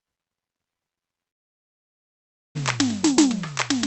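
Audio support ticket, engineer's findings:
Long network dropout, 1.29 to 2.57 s, likely packet loss on the call path. Receiver ran concealment over the gap: the music's last sound continues as a fading buzz, then silence. About 1.26 s of music never delivered; playback resumes at 2.57 s past the lost section. Music on both sides is band-limited near 8 kHz, consistent with Opus on the call path.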